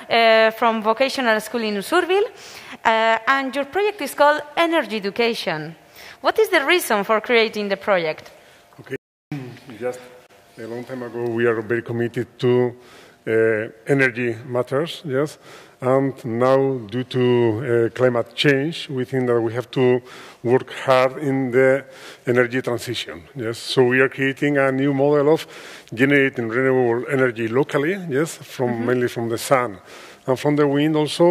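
The input was likely lost for a moment, so the recorder kept writing silence: an audio dropout to silence from 8.96 to 9.32 s. The sound cuts off abruptly and resumes mid-flow after about 0.36 s of dead silence with no room tone, and whatever happened in that gap is gone.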